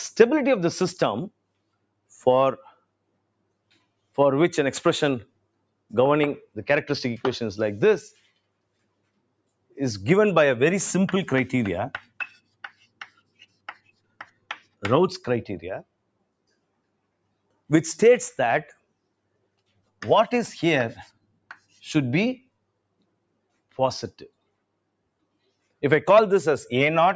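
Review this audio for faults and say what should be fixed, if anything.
The noise suppressor is cutting sound it mistook for noise, pulling it down by about 22 dB at worst within 1.3–4.18, 5.25–6.57, 8.11–9.77, 11.98–14.83, 15.83–17.7, 18.73–20.02 and 21.07–25.82 s. Steady or fading parts sink or get their tails chopped, while sharp onsets survive. The call's mic processing tops out around 8 kHz, which is expected. To fix it, ease the suppression strength or switch to a music/original-sound mode.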